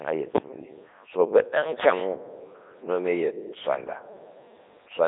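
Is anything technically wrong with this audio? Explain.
Yes. The speech has been through a Codec 2 vocoder for its whole length. Rather than keeping the waveform, the decoder rebuilds the voice from sine waves driven by pitch, voicing, energy and a coarse spectral envelope, and the damage here is heavy even at the codec's highest rate, around 3.2 kbit/s. It sounds robotic and buzzy. On a spectrogram the energy is confined to roughly 300 Hz to 3.7 kHz, with nothing above 3.8 kHz, and the harmonics look unnaturally regular. The original waveform is not preserved.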